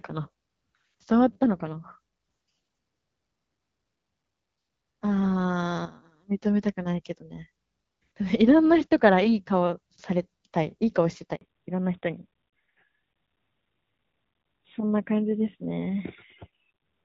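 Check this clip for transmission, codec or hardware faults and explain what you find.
Two transmission faults are audible, both at the same moment, where the call changes network.

A handover gap runs from 11.35 to 11.41 s. For 60 ms no speech frames arrive while the link switches, so the voice drops out abruptly and that stretch is lost.

A fallback to narrowband follows at 11.41 s and continues to the end. The codec drops from HD Voice to a narrowband mode, likely AMR-NB at 12.2 kbit/s. Nothing remains above 4 kHz, so the speech sounds duller and more muffled than the lightly coded wideband portion before it, which fits AMR-WB at 12.65 kbit/s.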